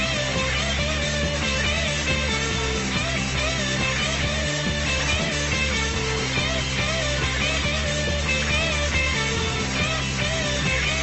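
Nothing stood out on listening to this clip.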